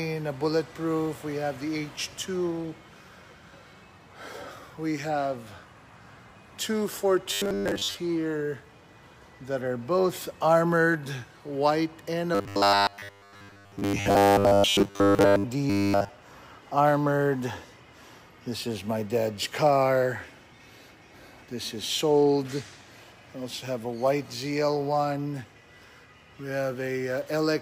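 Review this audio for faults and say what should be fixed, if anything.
Robotic sound from repeated short buffers occurs at 7.33–7.99 s, 12.35–15.44 s and 15.70–16.10 s. It is a rigid, metallic buzz at 100 Hz, likely caused by a 10 ms block being replayed whenever fresh audio arrives late. Most of the first two spans and all of the last are repetition. A spectrogram shows evenly spaced horizontal bands at multiples of 100 Hz, and the waveform shows one short shape copied end to end. A larger playback buffer and a fix for the late-delivery stall would prevent it.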